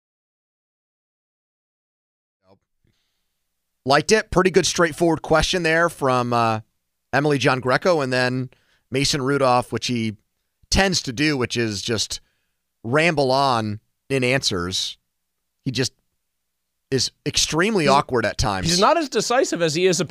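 The speech signal shows no technical faults, and the level rises smoothly from around 2.5 s to 3.39 s in a deliberate, editor-style fade-in with no click or hard edge.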